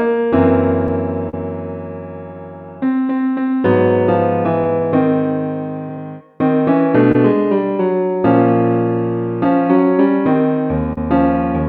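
The audio carries clock drift between sender and receiver: the sending clock runs about 2% slow, so the receiver's jitter buffer keeps draining and the playback has to be padded out to keep going. Small, irregular timing hiccups run through the whole clip, and on a waveform they show as slight unevenness in the spacing of onsets rather than any single obvious break. The buffer runs dry three times, each a short stall from a late packet. From 1.29 to 1.34 s the last sound is held for 38 ms, from 7.12 to 7.15 s for 26 ms, and from 10.93 to 10.98 s again for 38 ms. Nothing is lost in any of them, and the sound resumes exactly where it stopped, just that much later. On a spectrogram each stall appears as a brief stretch of frozen, horizontally smeared energy, sometimes with a faint buzzy texture or a small dip in level where the fill begins and ends. The waveform shows a short flattened or repetitive patch at each point. 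Between 2.34 and 9.85 s the receiver makes repeated timing corrections, inserting small repeated slices that slow playback to about 99% of normal speed and add roughly a tenth of a second in total. These edits all lengthen the sound and are spaced unevenly. Close inspection of the waveform reveals tiny duplicated cycles at the splice points.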